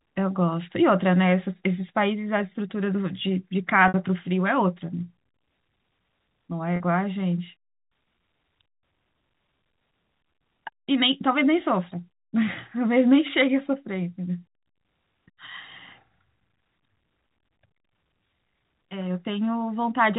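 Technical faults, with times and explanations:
3.88–3.94 s and 6.76–6.80 s, packet loss with pitch repetition: the speech briefly stalls on a slightly buzzy held tone, for 60 ms then 40 ms. Each gap was bridged by looping the last pitch period, which fits three and then two lost packets.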